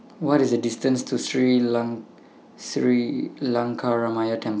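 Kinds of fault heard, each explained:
No technical faults can be heard in this speech.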